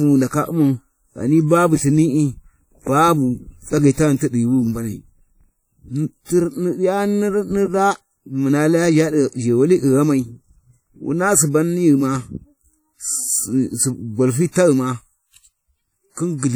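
Throughout the speech, a washy, ringing quality sits on every sound, with a hiss that swells and fades along with it, most likely WMA compression at a rate that fits about 48 kbps. Long transform blocks smear quantisation noise around transients, and a spectrogram shows speckled, gappy upper bands ending at 20.1 kHz.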